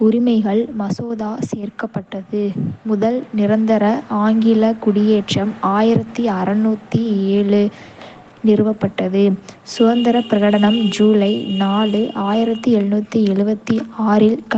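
Right from 0.05 s the automatic gain falling kicks in: the gain control judged the input too hot and eased its level down by about 6 dB through 1.18 s, so the speech starts loud and then sinks, taking the background down with it.

Then from 2.1 s to 3.71 s there's automatic gain rising, the opposite move. The control decided things were too quiet and brought the gain back up about 6 dB, so voice and room tone swell together just before "ஆங்கில குடியேற்றம்".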